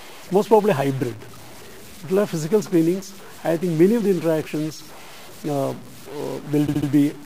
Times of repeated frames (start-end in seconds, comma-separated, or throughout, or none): 6.66-6.88